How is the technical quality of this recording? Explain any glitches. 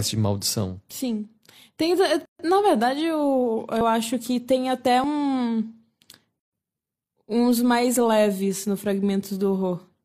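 The recording has two recurring types of glitch: brief silent gaps and skips in the speech.

Gap at a join of encoded pieces: at 2.25–2.39 s (140 ms) and 6.39–6.53 s (133 ms), four seconds apart, untrimmed encoder delay and padding between separately encoded segments open silences.

Dropped buffer: at 3.81 s, 5.04 s and 6.25 s, the speech jumps ahead, by roughly 50 ms, then about 20 ms twice. The likely cause is an overrun, where samples were overwritten before the program read them.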